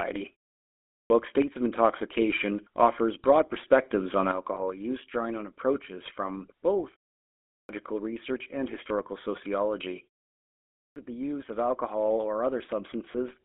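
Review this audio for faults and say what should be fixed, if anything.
GSM full-rate codec, throughout: the whole clip has the buzzy, gravelly roughness of this vocal-tract model driven by sparse, regularly spaced pulses. Nothing survives above 3.4 kHz or below about 250 Hz, which fits the 13 kbps full-rate coder. To prevent it, carry the call on a wideband or higher-rate codec.

Clipped start after a pause, at 0.58 to 1.10 s, 7.19 to 7.69 s and 10.46 to 10.96 s: after short silences of 0.3, 0.31 and 0.45 s, the output device sleeps and takes about half a second to wake. Each time, roughly 0.5 s of the following speech is swallowed, so it bursts in without its start. To prevent it, keep the output stream open through pauses instead of letting the device idle.

One channel drops out, from 4.32 s to the end, just after "offers broad perspectives on": the level abruptly falls by about 6 dB and stays down. 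This is likely one stereo channel lost before the mono sum, which halves whatever both channels shared. To prevent it, check the stereo link and downmix so a dead channel is caught rather than summed as silence.

Lost GSM frames, at 4.54 to 4.57 s (just after "offers broad perspectives on") and 13.12 to 13.15 s: a bad frame is concealed by repeating the last good frame's settings. This leaves a brief metallic, ringing hold, which fits a single lost 20 ms frame each time. To prevent it, improve the radio link or add error protection so fewer frames arrive corrupted.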